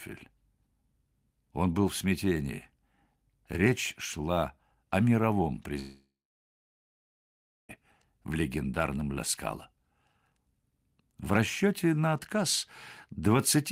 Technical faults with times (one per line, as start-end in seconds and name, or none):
5.79-7.77 long network dropout